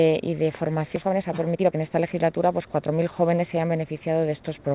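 The audio carries the narrowband character of a call path, with nothing above 4 kHz, which points to G.711 mu-law at 64 kbps, and it has two faults. At 0.96 to 0.98 s there is a skip ahead. Playback jumps forward with no fill, and about a second of audio is simply gone. The two sides are butted together almost directly. This is audio dropped on the way or by the buffer when it overflowed, while later audio was already waiting, which cuts the delay by roughly a second in one step. Immediately after, from 1.02 to 2.99 s, comes a jitter buffer speed-up. The audio runs at 124% of normal rate with its pitch unchanged, so it sounds hurried over those two seconds. The receiver was still holding more audio than its target. It trimmed short pitch-period-length pieces again and again, removing about half a second in total to bring the latency back down.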